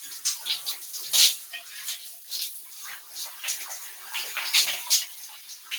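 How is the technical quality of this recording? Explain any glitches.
The recording has two dips from the noise suppressor. Sound cut by the noise suppressor at 2.15 to 2.31 s and 5.33 to 5.7 s: mistaken for noise, steady parts sink about 5 dB.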